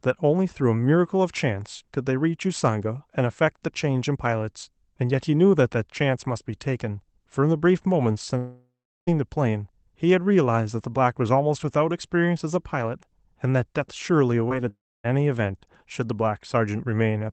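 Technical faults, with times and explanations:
8.37–9.09 s and 14.68–15.06 s, long network dropout: about 0.7 s, then about 0.36 s, of audio never arrives. The receiver stretches the last sound into a fading buzz or hiss, leaving about 0.37 s and 0.28 s of silence before the audio resumes without the lost part, likely because packets stopped arriving.
14.49–14.52 s, short concealed packet loss: about 20 ms of audio misses the decoder, which fills the gap by extending the preceding sound and blending back in. The result is a brief smear or wobble.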